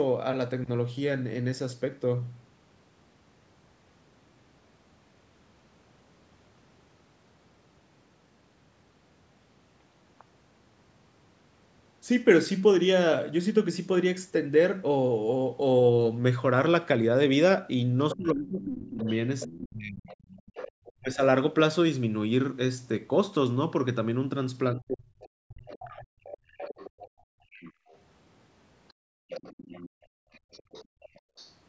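Speech passed through a call's microphone processing, with nothing above 8 kHz, and it shows three kinds of echo-canceller trouble. A second, fainter voice appears from 18.1 to 20.92 s, 25.69 to 27.98 s and 28.89 to 31.52 s, sitting about 15 to 20 dB below the talker. This is most likely the other side's voice leaking through, loudspeaker sound that the canceller failed to subtract. Because it is this quiet and lines up with the processing disturbances nearby, it is echo residue rather than a second person in the room. The talker's own voice falls away sharply, by roughly 30 to 40 dB at worst, from 18.14 to 20.09 s, at 21.0 to 21.21 s and from 24.75 to 26.15 s. Two of those stretches overlap the leaking voice, which points to speech suppressed in double talk. The likely cause is that the canceller could not tell the near talker from the echo and turned both down. That overlap is what separates it from an ordinary network dropout, which would not line up with the other side speaking. 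From 26.43 to 27.88 s and from 28.93 to 31.36 s, it is the room sound that drops out, by about 37 dB at its deepest. This is background gated by the echo canceller. It differs from double-talk suppression because the ambience vanishes while the loudspeaker plays and comes back when the canceller releases.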